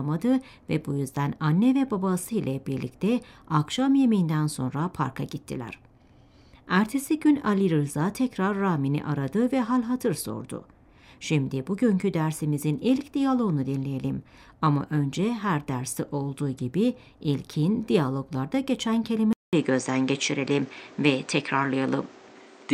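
At 19.33 s a 200 ms silence, then content above 8.8 kHz vanishes and level shifts, a flat spectrogram ceiling, likely an input switched to a poorer device.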